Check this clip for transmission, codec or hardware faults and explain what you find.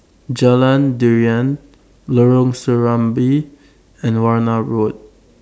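Nothing turns up here: the speech runs along without any dropouts, glitches or other transmission or hardware trouble to point to.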